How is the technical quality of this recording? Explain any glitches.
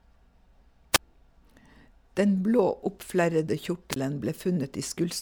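The recording has two brief wireless microphone squelch dropouts. They fall at 0.93 to 0.99 s and 3.91 to 3.96 s. The FM radio signal fades, and the receiver's squelch mutes it. Hiss rises, then near silence lasts about 26 ms and 21 ms before the speech returns.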